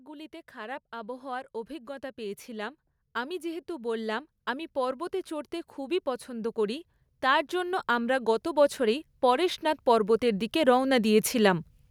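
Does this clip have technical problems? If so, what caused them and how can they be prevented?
Yes: automatic gain rising from 0.05 to 11.66 s lifts voice and background together by about 22 dB, unlike a speaker moving closer, which raises only the voice. Set a fixed input gain or disable AGC before recording.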